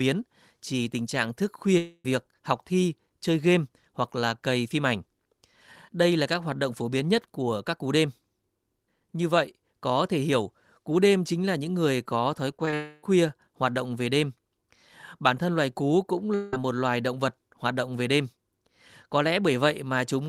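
At 1.77 s, after "chỉ tình trạng thức", a long network dropout (likely a stalled stream) leaves a fading buzz of about 270 ms and a brief silence before "học thi chơi game". Roughly 0.27 s of speech never returns. From 12.51 to 12.73 s, repeated packet loss punches five short holes, none over 20 ms. Patching covers about 27% of the span, giving a choppy texture. It runs straight into another long network dropout from 12.74 to 13.04 s, between "những người có thói" and "hoạt động về đêm". A smeared fill of about 280 ms, likely from a second network stall, replaces the missing stretch. A third dropout at 16.35–16.53 s, after "thân loài cú cũng", is likely another short stall. Its fill of about 180 ms fades into "một loài động vật".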